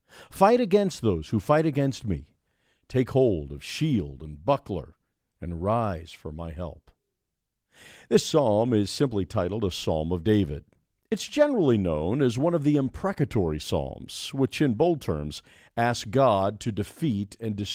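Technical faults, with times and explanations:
Nothing in this speech clip stood out as a technical problem on listening.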